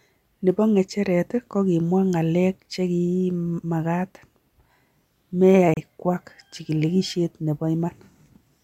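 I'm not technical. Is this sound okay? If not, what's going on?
No. At about 5.74 to 5.77 seconds the speech cuts out for roughly 30 milliseconds, a brief hole. The speech then resumes slightly further along, as if it had kept playing during the gap. This is likely a Bluetooth dropout: the wireless link to the headphones failed to deliver a small chunk of audio in time, and a gap of this length fits about two lost data packets.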